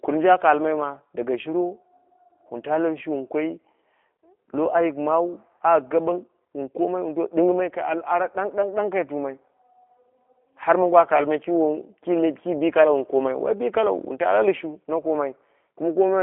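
Passing through a G.729 codec, the speech was rebuilt at each 10 ms frame from a vocal tract filter, a pitch predictor and a handful of pulses, at a rate that fits 8 kbit/s. From start to finish the result is a narrow telephone band of roughly 250 Hz to 3.4 kHz, nothing above 3.8 kHz, and a plainly audible rough, synthetic edge to the speech, with its airiness and sibilant detail gone.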